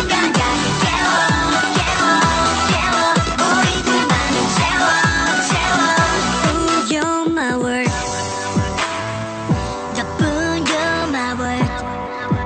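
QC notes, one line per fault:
No technical faults are present in the signal at any point.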